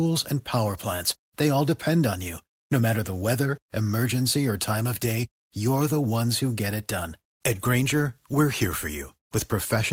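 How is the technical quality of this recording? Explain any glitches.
The recording is technically sound, with no glitches or interruptions anywhere in the signal.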